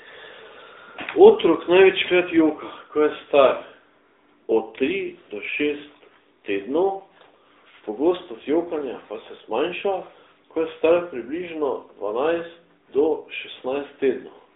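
Throughout, AMR narrowband mobile codec coding: the spectrogram stops sharply near 3.8 kHz, and speech sounds plainly buzzy and synthetic, which fits a mode around 10 kbps.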